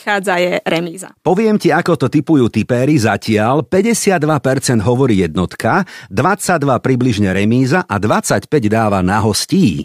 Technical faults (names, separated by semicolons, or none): none